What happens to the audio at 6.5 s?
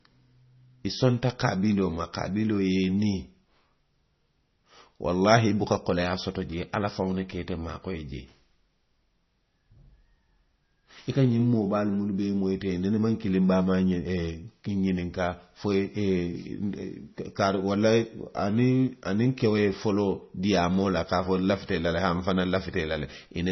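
At 6.5 s you're hearing the same damage that runs through the whole clip, which is most likely MP3 compression. Nothing gets through above about 5.9 kHz, so the speech sounds dull and watery, with swirly, chirpy s sounds. That heavy damage fits a starved bitrate around 24 kbps, where the encoder cuts off the treble and weak frequency lines flicker on and off from frame to frame.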